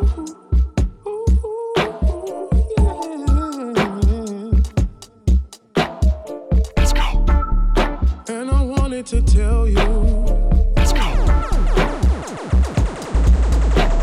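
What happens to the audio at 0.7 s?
Nothing goes wrong at 0.7 s; the audio plays through that moment intact, with no dropout, click or distortion.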